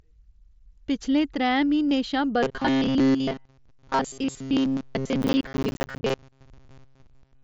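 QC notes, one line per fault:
1.89 s: concealed Bluetooth headset packet loss. About 22.5 ms of audio never reached the phone, which fits roughly three lost packets. The receiver filled the hole by repeating the closest-matching recent stretch of waveform. This is a short run of losses, so the patch sounds like a brief buzzy tone held at full level. A small warble gives it away as the real signal resumes.
2.43 to 7.43 s: robotic sound from repeated short buffers. From here to the end, the sound turns into a stiff, metallic buzz at 134 Hz. It still follows the speech loosely, but much of the real audio is missing. The likely cause is fresh audio arriving too rarely. The software loops the last small piece instead. A 134 Hz buzz fits a loop of about 7.5 ms.
5.22 to 6.10 s: processor overload crackle. For under a second, a gritty tearing rides on top of the buzz. The processor fell behind and missed dozens of audio deadlines again and again, with buffers of around ten milliseconds. 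Each missed buffer became a short gap of silence with hard edges. Strung together, those rapid dropouts sound like crackle. It stops once the load eases.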